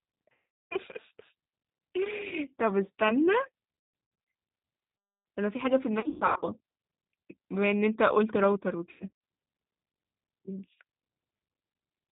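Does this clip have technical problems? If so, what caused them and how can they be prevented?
Yes. The speech passed through the G.729 codec, which fits an 8 kbit/s stream. It rebuilds each frame from a filter, a pitch predictor and a few pulses and cuts everything above 4 kHz, so the voice sounds dull, rough and synthetic. A wider-band, higher-bitrate codec such as Opus would prevent this.

VoIP packet loss concealed by the speech codec occurred five times. When packets went missing, the decoder stretched its last pitch and filter while fading the level, which produces buzzy, smeared, weakening sound. The first gap runs from 0.32 to 0.76 s, with about 390 ms missing. A brief one follows at 2.28 to 2.34 s. Scattered losses occur from 3.79 to 4.27 s, 6.00 to 6.44 s and 8.91 to 9.11 s, with runs up to 150 ms. A steadier network path, QoS priority for voice traffic, or forward error correction with a larger jitter buffer would prevent these dropouts.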